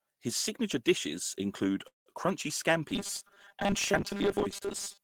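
A speech recording with two transport faults. From 1.87 to 2.09 s there is a call audio freeze: the speech halts, the last sound is held as a fading tail, and about 130 ms of it is near silence before the speech resumes from where it stopped. Nothing is lost, but about 186 ms of gap is inserted, so everything after it runs about 186 ms late. The likely cause is packets delayed in transit until the jitter buffer emptied. From 2.91 s to the end at 5.04 s the speech becomes robotic sound from repeated short buffers, a rigid metallic buzz at 200 Hz that still tracks the syllables loosely. A 200 Hz buzz corresponds to a 5 ms segment being replayed, and roughly half the audio in this stretch appears to be repeats standing in for skipped material, likely because new audio reached the playback stage too infrequently.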